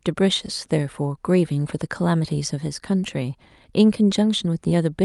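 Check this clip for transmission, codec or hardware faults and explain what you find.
Nothing here sounds broken: the speech comes through a call connection just as it should, with the top end rolling off around 12 kHz in the way a call codec normally shapes it, and no dropouts, glitches or other trouble along the way.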